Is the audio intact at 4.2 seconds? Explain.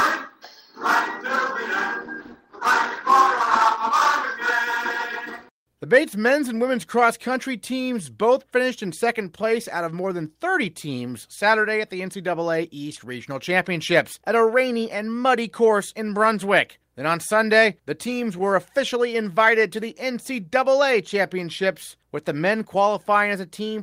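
No. A call bitrate drop runs from 2.03 to 4.45 s. The encoder is starved of bits, so the audio sounds coarse and rough, consistent with a fall from about 32 to 15 kbps.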